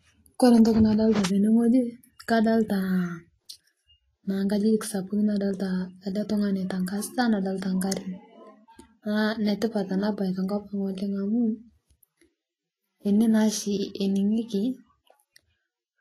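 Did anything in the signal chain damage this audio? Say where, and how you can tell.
Yes, at the codec stage. Throughout the speech, the treble is hissy and grainy, consonant attacks are smeared, and nothing sounds above 14.2 kHz. That points to a low bitrate, and likely Vorbis compression: coarse treble quantisation turns fine detail into similar-energy noise.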